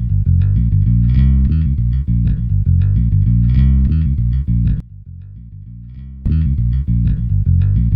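From 4.80 to 6.26 s the sound abruptly drops by about 20 dB and turns faint, likely from one channel inverted, so the shared content cancels in mono. The waveform visibly shrinks there, and the spectrogram darkens.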